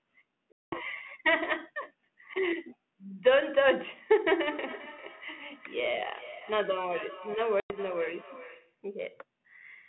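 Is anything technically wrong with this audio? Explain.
Yes, two faults are audible in this speech, which is carried over a G.726 ADPCM telephone link whose band ends near 3.4 kHz.

Packet loss on an ADPCM call occurs from 0.52 to 0.80 s, a 200 ms gap that fits about ten lost packets, and again from 7.60 to 7.76 s, a 100 ms gap. The missing audio was replaced with silence. Because ADPCM sends only differences from an adaptive prediction, the receiving decoder's predictor and step size no longer match the sender's when audio resumes. Each dropout is a sharp-edged hole followed by slightly distorted speech before it settles. A waveform shows a flat run with abrupt edges. A spectrogram shows a blank vertical band, then the speech resumes.

Feedback echo between two devices runs from 4.47 to 8.82 s. A second device in the same room plays back this call and feeds it into the microphone again. 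The local echo canceller cannot remove that path, because it only subtracts what its own device plays. Each phrase returns roughly 0.4 s later at up to about 18 dB below the direct speech, sounding thin and ringing. On a spectrogram, faint copies of the speech harmonics repeat at a steady spacing. The waveform shows smaller echoes trailing each burst.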